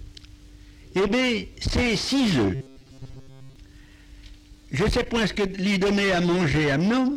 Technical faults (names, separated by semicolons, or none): robotic sound from repeated short buffers